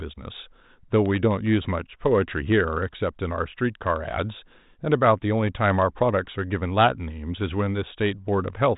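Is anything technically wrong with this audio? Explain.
No, nothing is technically wrong.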